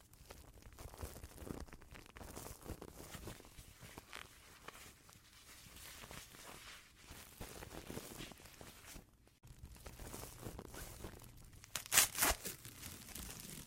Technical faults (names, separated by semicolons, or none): none